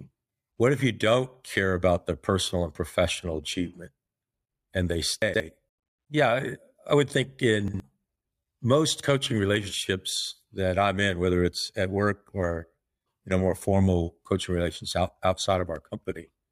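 At 5.22 to 5.4 s, just after "and they", a 60 ms chunk of speech plays two chunks late, so the order scrambles into a brief jumble with three hard joins. At 7.68 to 7.8 s, after "I would think", the same chunks-out-of-order fault recurs, one 60 ms chunk late.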